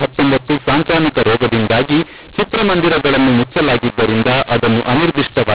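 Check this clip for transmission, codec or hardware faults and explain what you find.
One codec fault runs through the whole clip: mu-law and A-law mixed up. The speech was coded with the mu-law version of G.711 and then decoded as A-law. The two laws map the 8-bit codes to different sample values, so every level comes out wrong. Some samples are too loud and others too quiet. The quietest ones rise well above silence. The result is harsh, distorted speech, and the pauses fill with noise. Underneath this, the telephone coding itself comes through as expected for G.711 at 8 kHz, with nothing above 4 kHz.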